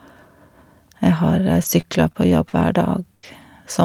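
From 1.63 s to 3.43 s the speech turns choppy and robotic, with pieces dropping out. This is repeated packet loss: five gaps, the longest 81 ms, each patched by stretching the preceding sound, rebuilding around a fifth of a second.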